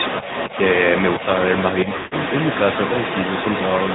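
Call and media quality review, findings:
AMR narrowband mobile codec, entire clip: nothing above 4 kHz, buzzy, synthetic vocal quality from pulse-excited vocal-tract modelling. The damage fits a mid-rate mode near 10.2 kbps. Unlike plain band-limiting, it adds a coarse, artificial texture, not just muffling.

Other side's voice leaking through, 0.00 to 3.95 s: a second voice runs alongside the main speech, nearly as loud as it. The likely cause is residual acoustic echo from loudspeaker playback not cancelled at the far device.

Lost AMR speech frames, 1.96 to 2.14 s: the speech smears and stretches, fading toward silence over 160 ms, then returns weak and rough. The decoder repeated the last pitch and tract settings with decaying gain, which fits about eight consecutive lost frames. A dropout would cut abruptly.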